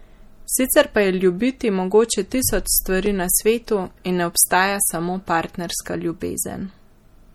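MP3 compression runs through the whole speech clip, and its damage is plainly audible. This is likely caused by low-bitrate MP3 encoding, in the region of 48 kbps. When bits run short, the encoder drops weaker frequency lines, which appear and vanish from frame to frame. That gives the sound a watery, swirling quality, and attacks smear. The treble stops at 20.7 kHz, the fixed ceiling where the encoder discards everything above.

A block of digital silence occurs at 3.06 s and lasts 5.33 ms, a length that fits a 256-sample buffer. For that instant the output is replaced by zeros, either because the audio program failed to fill its output buffer in time or because a calculation produced invalid values. The sound drops out and returns abruptly with no fade. At this length it is heard as a brief tick or dip, not a gap.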